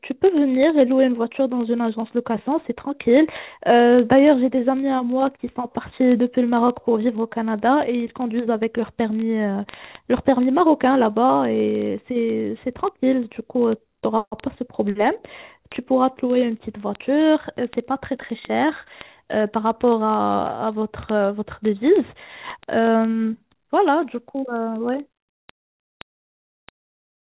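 From 0.11 s to the end, word clock ticks run through the speech. A digital link is being read by a device on its own clock, not locked to the sender's. The two clocks differ by roughly one part in a thousand. So they slip past each other about every 20 ms. Each slip drops or repeats a single sample. The result is a steady tick, about fifty a second, sharp and uneven in strength. It sits above call-path audio that stops at 4 kHz.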